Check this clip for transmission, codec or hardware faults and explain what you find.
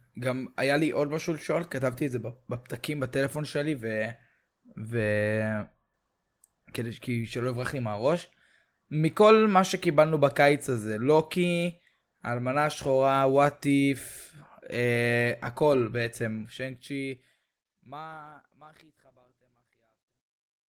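No transmission, codec or hardware faults are audible here.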